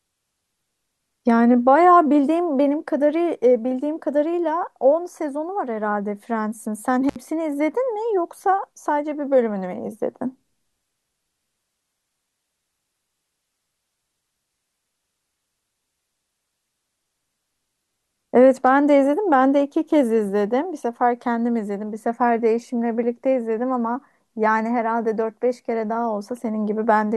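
Speech, with one intermittent contact dropout from about 7.09 to 7.16 s. For roughly 64 ms the signal just vanishes, with a little crackle at either edge as the connection breaks and then makes again, and faint hiss underneath while it's open. That's the classic sound of a loose plug or a tired cable briefly losing contact somewhere in the chain, not anything wrong at the source.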